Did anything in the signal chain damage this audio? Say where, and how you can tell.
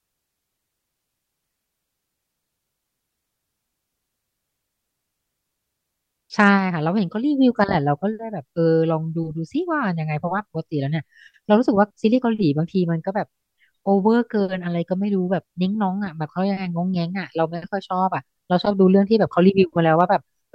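No, nothing along the signal chain audibly damaged this speech recording, and no stage from capture to playback left any trace that can be heard.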